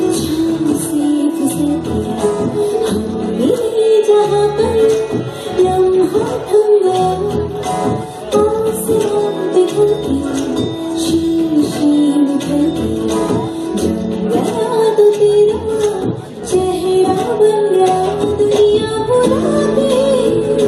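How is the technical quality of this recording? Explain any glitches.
Listening through the recording, nothing stood out as a technical problem at any point.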